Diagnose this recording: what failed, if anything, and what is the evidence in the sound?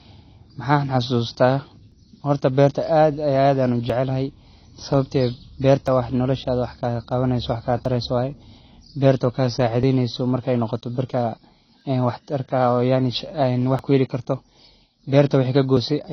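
AAC compression, throughout: the speech is band-limited with nothing above 6.5 kHz, and the codec damage is plainly audible as a dull, smeared texture. This stage is likely an AAC-LC encode at a low bitrate, around 24 kbps, where the coder lowers its cut-off and quantises the remaining bands coarsely.

Audio missing between chunks at 1.92, 3.90, 5.88, 7.85, 9.83, 11.81, 13.79 and 15.77 s: short skips of about 20 ms recur roughly every 2 s, and the sound on either side is butted together with no gap. This is likely a buffer-stage loss as each 2 s chunk closes and the next opens.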